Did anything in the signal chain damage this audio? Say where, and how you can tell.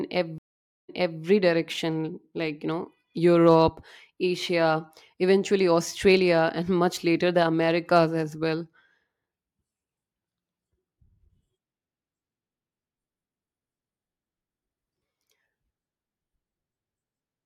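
Yes, a stream reconnect at the network stage: sound drops out at 0.38 s, giving about 0.50 s of blank waveform and empty spectrogram, then resumes around 1.23 s from a point 0.34 s earlier, so a short stretch repeats as the restarted decoder picks up a resent burst.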